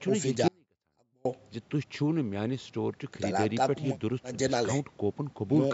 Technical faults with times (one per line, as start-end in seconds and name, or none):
0.48-1.25 audio dropout to a faint residue